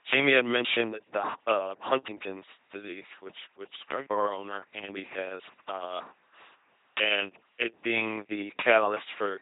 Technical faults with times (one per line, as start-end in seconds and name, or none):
0.00-9.41 LPC-10 vocoder